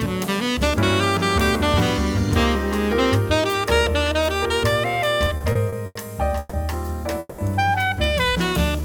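Between 5.25 and 5.97 s, packets kept arriving late and the jitter buffer ran dry six times, producing repeated stalls (stutter). The receiver stretched the last sound through each gap, the longest about 90 ms and about 200 ms in all, so nothing is lost but the audio drags and jerks forward.

Two call audio freezes follow, likely from packets held up in transit emptying the buffer. At 6.39 s the last sound is held for 140 ms as a fading buzz or hiss, and at 7.19 s for 190 ms, ending in a brief silence. Each time the audio resumes where it stopped, now running later.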